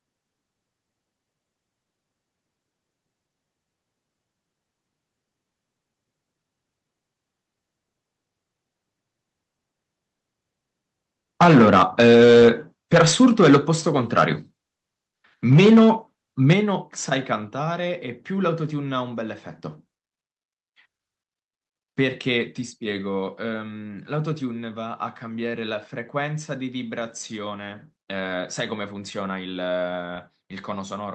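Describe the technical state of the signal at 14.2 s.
Right around 14.2 s there's a burst of harsh, crackly distortion from about 14.17 to 14.24 s, and it sounds like microphone overload. The likely cause is input gain set too high, so the loudest peak pushed roughly 7 dB past the converter's ceiling and got its tops sheared flat. Around one sample in twenty is clipped, which is what gives that gritty edge. It rides on top of the call audio's 8 kHz band limit.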